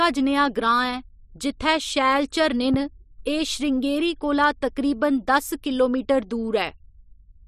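At 2.74 s a single loud pop lands on the speech and is gone by 2.76 s, peaking about 10 dB above it. It is most likely a voltage spike, from a plug, switch, static discharge or driver glitch, added into the signal chain and shaped into a brief pulse by the circuitry after it. Unlike a dropout or an edit click, the speech carries on uninterrupted beneath the thump. Nothing is lost, only something is added on top.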